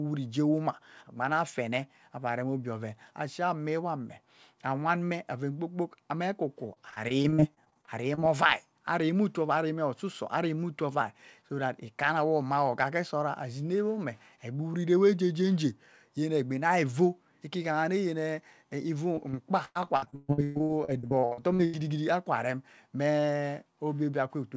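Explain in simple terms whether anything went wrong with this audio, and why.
Yes, something went wrong. There is repeated packet loss (robotic sound) twice: from 6.74 to 8.19 s, and from 19.15 to 21.75 s, just before "akwa rem". Pieces of sound went missing. Each hole was patched by stretching the last sound, so the speech turns choppy and robotic.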